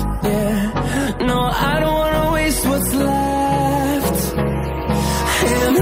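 No technical faults can be heard anywhere in this audio, so there are none to describe.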